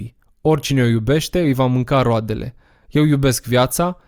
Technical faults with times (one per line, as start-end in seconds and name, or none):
none